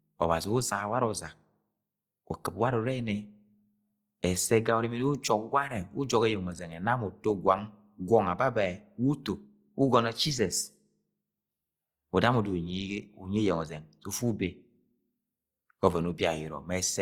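Opus compression runs throughout this speech clip, making the sound plainly grainy and rough, though it still reaches about 20.4 kHz. It likely comes from Opus CELT mode at a low rate near 24 kbps, filling starved bands with folded spectrum or noise.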